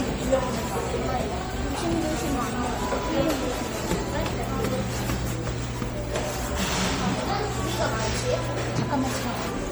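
A recording of sounds, degraded throughout by generation loss: the whole clip has a swirling, hollow, smeared texture, with transients blurred and spectral gaps that seem to pile up rather than sit still. That excess is what separates it from a single low-bitrate encode, which would sound thin but steadier. The character fits MP3 at around 64 kbit/s, most likely re-encoded several times over, each pass adding fresh quantisation noise on a shifted frame grid.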